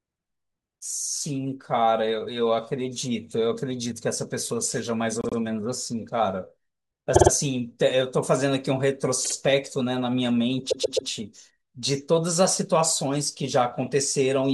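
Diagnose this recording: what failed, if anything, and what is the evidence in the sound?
Repeated frames in the compressed stream: blocks of compressed audio replay, so the speech stutters at 5.21, 7.15, 9.24 and 10.70 s, each adding 0.1 to 0.39 s.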